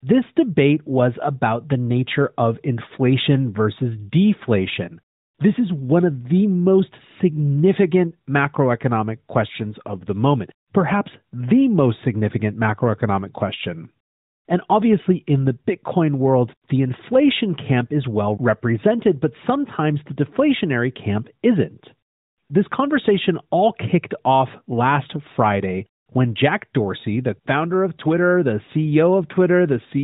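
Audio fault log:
Nothing to log here, since no faults turn up anywhere in this speech recording.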